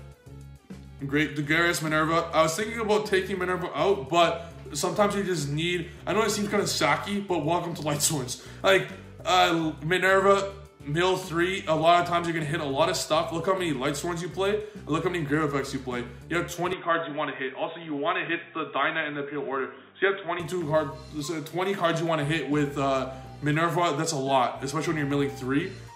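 At 16.73 s the sound turns dull and boxy. Nothing above about 3.8 kHz survives, with no gap at the change and little level shift. A faint new background noise appears. This likely comes from the input switching to a poorer device, until full bandwidth returns at 20.40 s.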